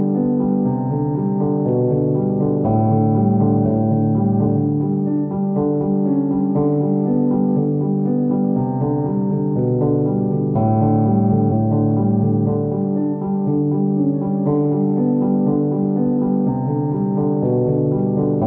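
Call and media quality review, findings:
Compressed frames skipped at 4.42–4.46 s and 11.47–11.51 s. Decoder dropped whole frames, either missing from the file or rejected as corrupt. Audio jumps ahead about a tenth of a second each time.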